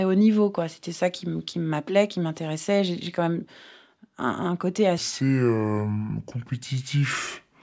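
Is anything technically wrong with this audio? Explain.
Yes. Wrong sample rate from 4.98 s to the end at 7.62 s: the speech plays at two-thirds speed and about 7 semitones lower, slow and deep, which fits 24 kHz audio played back at 16 kHz.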